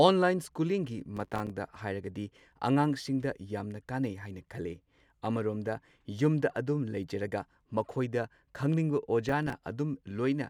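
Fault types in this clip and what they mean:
Processor overload crackle: the processor keeps missing deadlines on tiny few-millisecond buffers, so strings of silent dropouts crackle through the speech around 1.17–1.50 s and 9.29–9.62 s.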